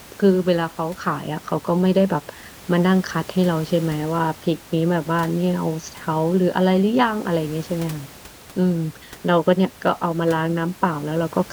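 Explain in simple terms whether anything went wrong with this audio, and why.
Nothing went wrong; this speech recording has no faults.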